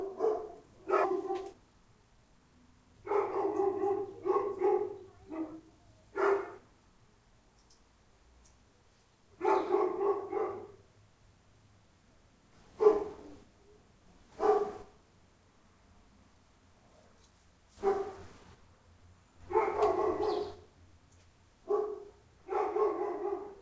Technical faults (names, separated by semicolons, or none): skip ahead; jitter buffer speed-up